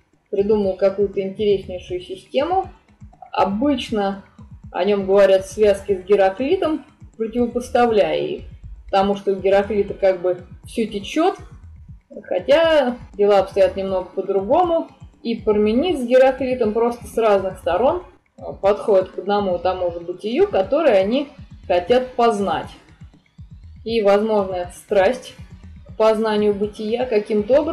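No technical faults are audible.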